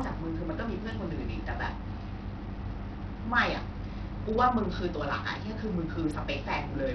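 It's a speech clip, and the whole thing has that gritty, flickering top end with treble dropping in and out, likely Bluetooth SBC compression at a starved bitrate around 64 kbps.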